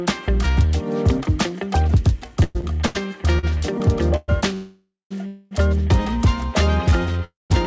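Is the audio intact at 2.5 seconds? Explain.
No. From 2.44 to 2.57 s the sound stalls into a brief fading buzz or hiss of about 110 ms, then resumes exactly where it left off, so nothing is lost but the audio is pushed later by that amount. This is a call audio freeze, likely caused by packets arriving late and the jitter buffer running dry, leaving the receiver to extend the last sound until the stream caught up.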